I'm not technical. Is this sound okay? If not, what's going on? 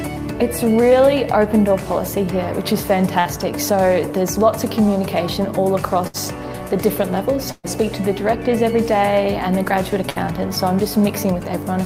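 No. The audio has four short dropouts, each a burst of packet loss: at 3.19 s, 6.07 s, 7.52 s and 10.09 s. In each one, a small piece of the sound never arrived, about 60 ms, or 120 ms at 7.52 s. The player covered the hole by stretching the last bit of sound into a brief fading buzz or hiss, then jumped ahead. At 7.52 s this ends in a moment of silence.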